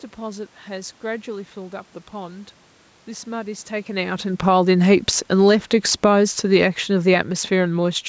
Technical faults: automatic gain falling

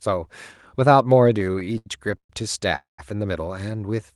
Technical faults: repeated stalls (stutter); call audio freeze

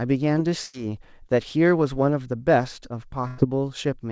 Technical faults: burst of packet loss

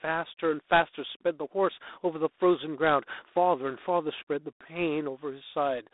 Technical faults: G.726 ADPCM

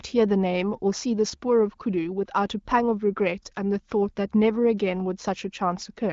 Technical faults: none

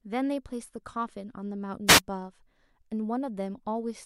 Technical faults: wireless microphone noise hit

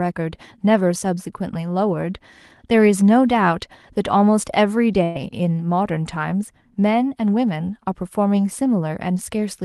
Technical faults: burst of packet loss

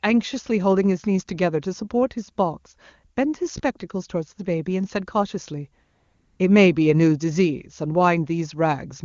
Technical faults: AMR comfort noise

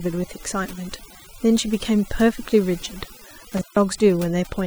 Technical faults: overdone noise removal; intermittent contact

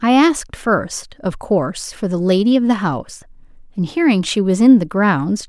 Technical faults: none

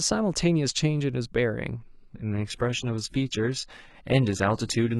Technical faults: adaptive stream at a lower bitrate

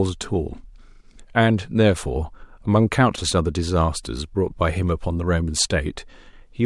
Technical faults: none

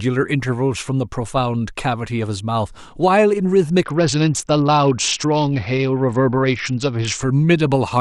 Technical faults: Bluetooth SBC bit pool drop

